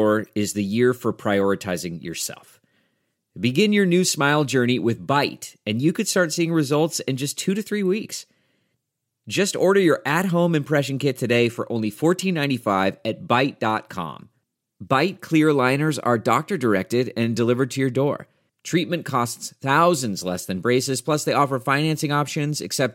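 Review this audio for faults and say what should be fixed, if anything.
Nothing here needs fixing; no faults can be heard.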